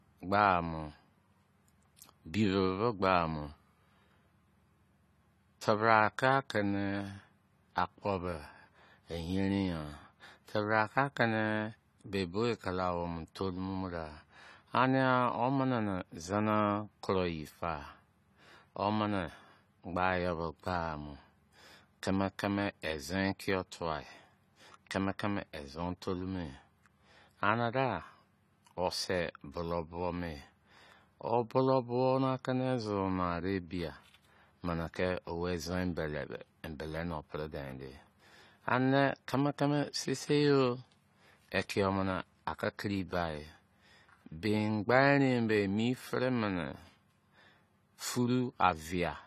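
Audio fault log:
Throughout: AAC compression. The speech sounds dull and plainly smeared, with a warbling, fizzy texture on sibilants and held vowels. Nothing survives above 14.1 kHz, so a spectrogram shows a flat ceiling at that height, with patchy holes or noisy, blocky fill in the upper bands; the waveform looks normal. The cause is likely AAC-LC coding at a low rate, which fits about 32 kbps, dropping and roughly quantising high-frequency detail.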